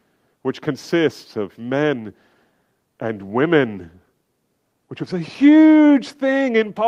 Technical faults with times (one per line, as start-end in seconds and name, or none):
none